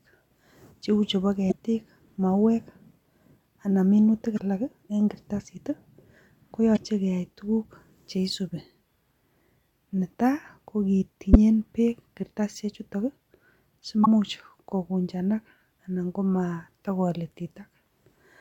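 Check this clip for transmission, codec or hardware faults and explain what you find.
Five short bursts of damaged data in a compressed stream occur in this speech, at 1.48–1.54, 4.35–4.41, 6.73–6.78, 11.33–11.36 and 14.02–14.07 s. Each lasts about 30 to 60 ms. Corrupted bytes make the decoder misread frames and lose sync, producing a brief chirp, squawk, click or short hole rather than the smooth fill of dropped network packets.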